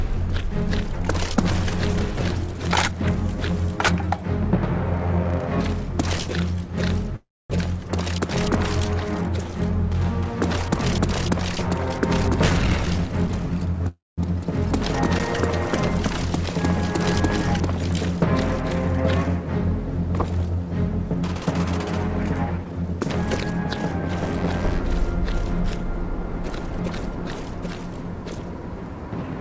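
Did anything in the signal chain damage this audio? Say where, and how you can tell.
Yes, at the network and jitter-buffer stage of the call path. Packet delivery likely stalled twice and the jitter buffer ran dry. At 7.16 to 7.52 s the receiver carried the last sound forward as a fading buzz or hiss, then went silent for about 240 ms. At 13.88 to 14.20 s the same happened, with about 200 ms of silence. When packets resumed, the audio picked up where it stopped. Nothing was lost, but roughly 0.3 s of gap was added each time.

A jitter buffer speed-up appears three times. The buffer held more audio than its target, so it cut out short pitch-period slices to catch up. The sound runs fast with its pitch unchanged: at 12.24 to 13.88 s it plays at 118% speed, shedding about 0.3 s; at 21.04 to 21.38 s it plays at 112%; and at 22.58 to 24.10 s it plays at 109%, dropping roughly 0.15 s. Under the G.722 call codec, which stops at 8 kHz, those stretches sound rushed.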